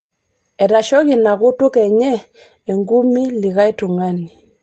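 No technical faults can be heard in this speech clip, which comes through a WebRTC call path with Opus coding working as expected and a bandwidth that reaches to about 8 kHz.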